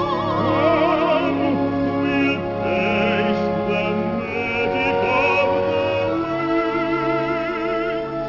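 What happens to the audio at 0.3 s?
At 0.3 s the audio shows aliasing, present throughout the clip. The sound points to a drop to a 12 kHz rate with no filter first. Content above 6 kHz folds back as unrelated tones, roughly 30 dB below the signal. High detail turns gritty and metallic.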